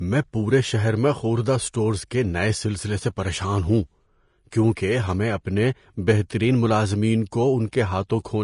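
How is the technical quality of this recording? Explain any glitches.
The technical quality is compromised. The speech carries audible lossy-coding damage from start to finish.

Vorbis compression is the likely culprit, at what sounds like a fairly low bitrate, around 34 kbps. Nothing comes through above 10.6 kHz, so the top end sounds dull and shut off. Below that, the treble has been quantised so coarsely that fine detail turns into noise of similar energy. The result is a hissy, grainy sheen, roughened tones, and softened consonant attacks.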